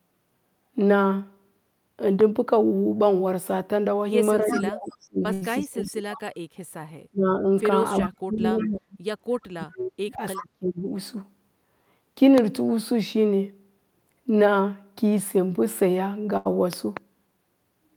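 At 2.21 to 2.23 s a loud pop, peaking about 10 dB above the speech and likely from a switching or static transient, shows as a single vertical spike on the waveform and a full-band stripe on the spectrogram.

From 4.41 to 6.20 s comes speech suppressed in double talk, likely an echo canceller attenuating both talkers at once. The level sinks by up to about 30 dB, seen as a hollowed envelope and faded upper bands.

Inside that span, from 4.50 to 5.05 s, an echo leak returns a copy of the speech 353 ms late at about 10 dB below it. It is likely residual loudspeaker pickup and shows as faint repeated spectral patterns trailing the originals.

At 5.33 to 5.43 s a burst of packet loss replaces about 80 ms of speech with a decaying fill, a held buzz or hiss. It looks like smeared, fading harmonics before the speech resumes further on.

At 5.82 to 5.91 s a quieter echo leak repeats 353 ms late at about 20 dB down.

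Double-talk suppression returns at 7.11 to 7.44 s, dropping about 30 dB. It hits harder at 8.03 to 8.97 s and 9.51 to 10.88 s, with drops of about 40 dB and near-empty gaps in the spectrogram. Echo leaks overlap those spans at 8.01 to 8.69 s and 10.36 to 10.46 s, each about 15 dB down with the same 353 ms delay.

A 15 dB pop at 12.38 to 12.40 s shows as a sharp spike.

A second packet-loss burst at 16.37 to 16.47 s again fills about 80 ms with a fading tail.

Finally, two pops of about 15 dB at 16.73 to 16.99 s appear as twin spikes, likely from a plug or driver glitch.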